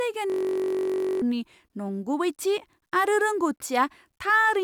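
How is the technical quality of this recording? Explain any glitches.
A system hang loop mars the recording. From 0.30 to 1.22 s, the speech gives way to a steady, rough buzz pitched at about 47 Hz before normal audio resumes on "नंगुबैथि आरो". The computer or audio driver froze while the sound hardware kept replaying the last 21.33 ms of its ring buffer, which fits a 1024-sample buffer. That tiny fragment repeats about 43 times, so the short loop fuses into a drone rather than a stutter, and roughly a second of the original sound is lost.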